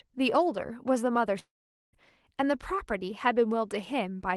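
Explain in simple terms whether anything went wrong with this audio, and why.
From 1.39 s to 1.96 s the speech breaks off. The last sound smears into a fading buzz, then near-silence, and about half a second never comes back. This is likely a long network dropout: the call stopped receiving audio, and the receiver padded the gap.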